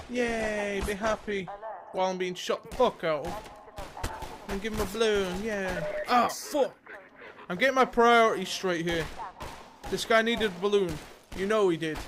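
The clip opens with an adaptive stream starting at a low bitrate: from 0.0 to 2.0 s the audio has nothing above 12.1 kHz and carries stronger codec artefacts, which fits an Opus encode near 16 kbit/s. At 2.0 s the quality jumps to a fuller version, consistent with around 64 kbit/s, with no gap. The step comes once, at the very start, and there is no pause or rebuffering around it. That sets it apart from a mid-stream bitrate drop or a stall.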